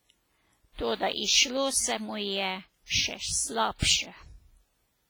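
Throughout the speech, heavy transform-codec damage is heard, likely WMA compression at a low bitrate, which fits about 24 kbps. Long blocks smear quantisation noise into a ringing, washy hiss that breathes with each phrase, unlike steady background noise, which stays constant between phrases.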